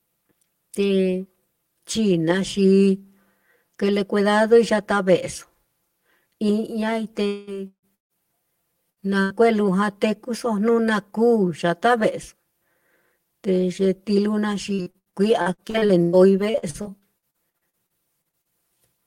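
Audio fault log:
Throughout: channel delay (comb filtering). One channel of the speech runs roughly 5 ms behind the other, and when they sum to mono, shared content cancels at evenly spaced frequencies starting near 100 Hz. The hollow, phasey colour stays fixed for the whole clip, unlike the brief, moving holes of packet loss.
7.27–7.50 s and 7.67–7.86 s: long network dropout. About 200 ms and 160 ms of audio went missing, likely because the stream stalled. The first gap is bridged entirely by a fading continuation of the last sound. The second fades into silence, and speech resumes further on with that stretch gone.
7.95–8.13 s, 8.90–9.00 s and 9.22–9.33 s: burst of packet loss. Short runs of audio, 160 ms and then 80 ms twice, never played. The last sound is stretched into a fading buzz or hiss, and in the first of these it gives way to near silence. Each is a single isolated gap, not a choppy run.
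14.74–18.52 s: repeated packet loss (robotic sound). Twenty-five gaps, the longest 111 ms, add up to about 1.1 s of lost audio. Each is patched by continuing the last sound, covering about 28% of the span. The holes come so close together that the speech turns choppy rather than just briefly cut.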